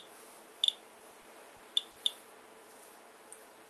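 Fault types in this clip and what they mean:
Repeated stalls (stutter): from 0.99 to 1.98 s the jitter buffer ran dry five times; the last sound was stretched over each gap, so it drags.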